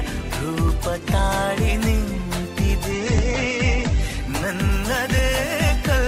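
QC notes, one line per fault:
2.92–6.07 s, call bitrate drop: the encoder is starved of bits, so the sound turns coarse and watery and the top end stops at 8 kHz, consistent with a fall from 96 to 10 kbps.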